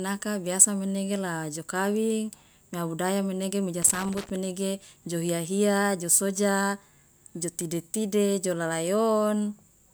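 From 3.82 s to 4.30 s, right after "budaya menege mi ja", the speech breaks into loose connector crackle for roughly half a second. A worn or dirty contact is making and losing connection as it shifts, so the signal keeps dropping out and snapping back, with sharp pops where any DC on the line jumps. It sounds like irregular scratching. On a waveform, the speech is chopped into ragged gaps and spikes; a spectrogram shows scattered broadband vertical streaks across that interval.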